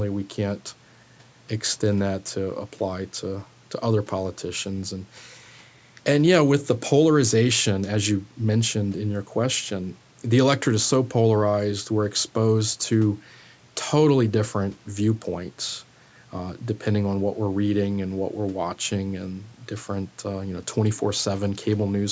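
No technical faults are audible in this speech.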